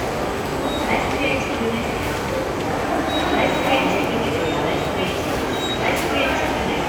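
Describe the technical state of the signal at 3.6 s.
At 3.6 s the signal shows a stuck bit, running from 3.52 to 4.02 s. One data bit is likely held at a fixed value, so about half the samples are off by a step of roughly -45 dBFS. This gives grainy noise, with noise filling quiet moments.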